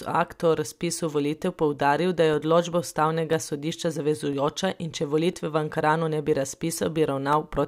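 From 1.34 s, after "akta o razpisu", to 7.33 s, periodic USB or driver dropouts silence about a millisecond each second: steady, evenly spaced ticks, unlike random crackle.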